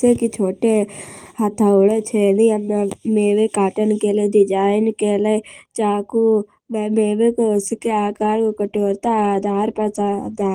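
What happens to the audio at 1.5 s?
At 1.5 s you're hearing channel delay (comb filtering), and it's there for the whole clip, not just that moment. One channel lags the other by about a third of a millisecond, and when the two get folded to mono, the shared parts cancel at regularly spaced frequencies. The first notch sits around 1.5 kHz, with more following at roughly 3 kHz steps, so the speech comes across hollow and a bit phasey.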